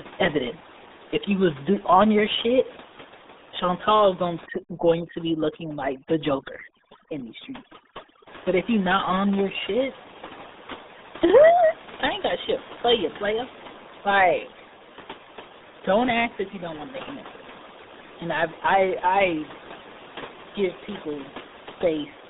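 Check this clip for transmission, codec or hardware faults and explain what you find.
One codec fault runs through the whole recording. The RealAudio 14.4 codec shapes the speech from start to finish. The line band sits between about 200 Hz and 3.7 kHz, and nothing passes above 3.8 kHz. The damage is heavy, which fits an 8 kbit/s dial-up speech codec. At that rate the codec models the voice coarsely and discards the upper spectrum. Consonants lose their edge. The speech sounds muffled and gargly. The room noise stays about 16 dB below the speech.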